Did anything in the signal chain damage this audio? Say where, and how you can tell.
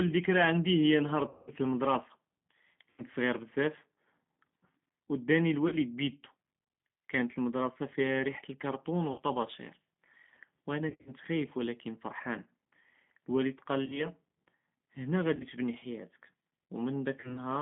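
Yes. G.729 codec damage runs through the whole speech clip at the codec stage. The line is band-limited to roughly 150 Hz to 3.6 kHz, with nothing above it. The speech has the plainly audible rough, slightly synthetic texture of a low-rate codec that rebuilds each 10 ms frame from a vocal-tract filter, a pitch predictor and a few pulses. That character fits 8 kbit/s G.729A rather than a wideband path.

VoIP packet loss concealed by the speech codec occurs at the network stage, at 1.29–1.52 s (right after "היא נהאר"), 2.90–3.03, 5.68–5.76, 9.12–9.21, 10.90–11.13, 13.86–14.06 (after "אלואלד קאל"), 15.36–15.44 (just before "תבני חיאתך") and 17.20–17.38 s. At each gap the decoder extends its last pitch and filter into a fading buzzy tone or coloured noise. The longest hole, 180 ms at 1.29 s, fits about nine lost 20 ms packets. At 10.90 s the losses are scattered over 160 ms. The sound stays weak briefly after packets return.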